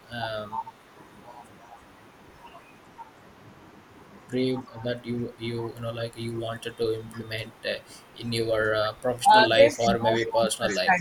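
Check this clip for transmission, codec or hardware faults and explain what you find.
Two faults are audible in this speech: speech suppressed in double talk and echo leak.

Speech suppressed in double talk occurs at 0.51–0.72 s, 9.19–9.31 s and from 9.57 s to the end. The voice dips by roughly 5 to 20 dB. An echo canceller, likely confused by simultaneous talk, is attenuating the near talker along with the echo.

Echo leak appears at 4.74, 7.13, 9.74, 10.19 and 10.69 s as brief, faint repeats of the voice about 322 ms late. They sit around 30 to 35 dB down early on and rise to about 20 dB down near the end. The likely cause is loudspeaker pickup the far-end canceller failed to remove.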